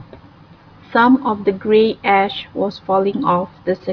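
A short piece of recorded speech, with nothing technically wrong to be heard in it. No audible faults occur at any point in the recording.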